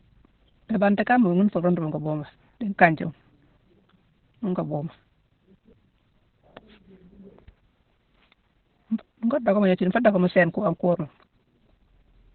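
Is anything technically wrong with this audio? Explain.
Yes, the whole clip carries heavy Opus voice compression. Nothing survives above about 4.2 kHz, which points to the codec running its SILK speech coder at narrowband, the kind of squeeze you'd expect around 8 kbps. SILK models the voice as a filter driven by an excitation signal, and at that rate the excitation is coded very coarsely. So the speech comes out muffled and telephone-thin, with a hoarse, slightly robotic edge from start to finish.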